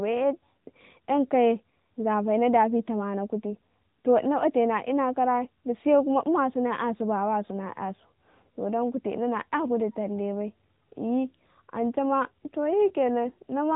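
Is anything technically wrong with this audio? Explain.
Yes. AMR narrowband mobile codec damage, throughout: the speech is band-limited below 3.8 kHz and modelled in coarse frames, which fits a roughly 10 kbps rate, sounding buzzy and synthetic.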